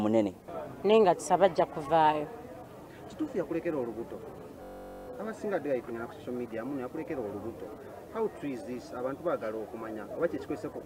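At 4.63 s the audio locks into a system hang loop lasting until 5.08 s. The computer or its driver stalled while the sound hardware kept replaying one stretch of its ring buffer. That stretch is 21.33 ms long, which fits a 1024-sample buffer. It repeats exactly 21 times. At this short length the repeats fuse into a steady buzz at 46.9 Hz. Almost no audio appears to be lost when playback resumes.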